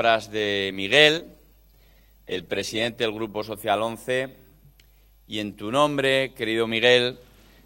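From 0.39 to 6.09 s, a call bitrate drop. Coarser coding turns the sound rough and muffled, fitting a fall from 96 to 20 kbps, bottoming out for 2.39 s.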